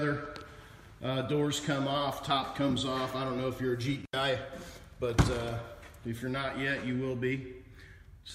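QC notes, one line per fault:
4.02–4.13 s, intermittent contact. The sound drops out for about 78 ms, with a short crackle at each edge of the gap. A loose plug or cable briefly loses its connection, so the signal path opens and the programme vanishes. The crackle comes from the contact scraping as it breaks and then makes again. While the line is open, a faint hiss remains, and then the audio returns abruptly.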